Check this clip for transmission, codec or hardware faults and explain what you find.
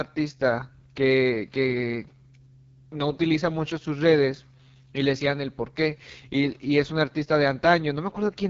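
An AMR wideband (HD Voice) codec fault runs through the entire clip. The speech is modelled as pulses driving a vocal tract filter, with shaped noise filling the top band and nothing above 7.4 kHz. The heavy rough, raspy texture fits the lowest 6.6 kbit/s mode.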